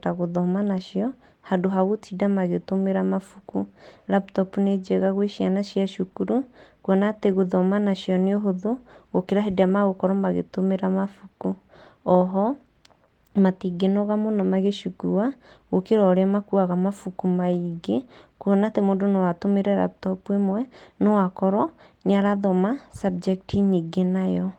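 No technical faults occur at any point in this speech clip.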